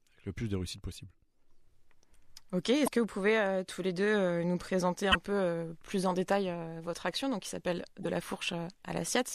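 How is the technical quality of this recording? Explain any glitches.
The recording has three brief glitches, all caused by damaged data in a compressed stream. At 2.84–2.88 s, 5.11–5.15 s and 8.01–8.05 s, part of the encoded speech data arrived corrupted. The decoder misread those frames, lost sync, and hunted for the next valid frame header. Each event lasts about 44 ms and sounds like a short chirp, squawk, click or brief hole that briefly breaks into the speech before clean playback resumes.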